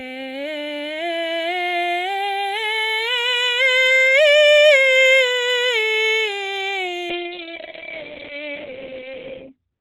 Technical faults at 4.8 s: none

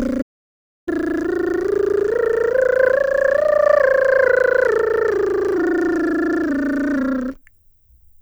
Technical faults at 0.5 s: audio dropout to silence

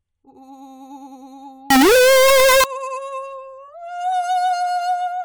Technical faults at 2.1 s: signed and unsigned mixed up

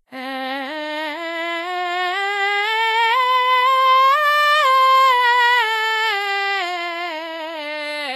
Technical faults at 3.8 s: Vorbis compression

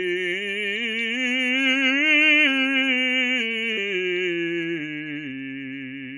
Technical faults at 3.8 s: damaged data in a compressed stream

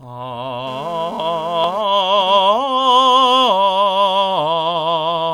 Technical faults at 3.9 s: none

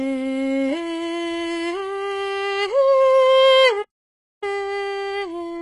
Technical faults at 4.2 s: HE-AAC compression; playback stall

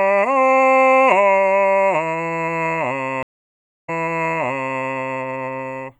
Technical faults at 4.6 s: stream reconnect

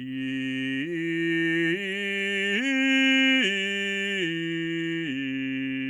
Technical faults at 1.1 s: none

